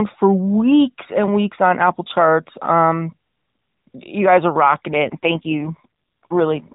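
From 4.92 s to the end, the speech turns rougher and more buzzy, an AMR rate drop. The network moved the codec to a lower mode, which fits a fall from 12.2 to 4.75 kbps. Unlike packet loss, there is no gap. Unlike a bandwidth switch, the narrowband AMR band stays the same as in the lightly coded earlier part.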